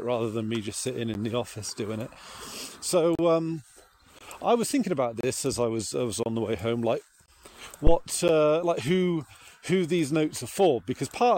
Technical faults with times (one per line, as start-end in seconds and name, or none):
1.14 gap between stream segments
2.15 gap between stream segments
3.15-3.19 gap between stream segments
4.19-4.21 gap between stream segments
5.21-5.23 gap between stream segments
6.23-6.26 gap between stream segments
7.26-7.28 gap between stream segments
7.87-7.99 phantom power thump
8.28 gap between stream segments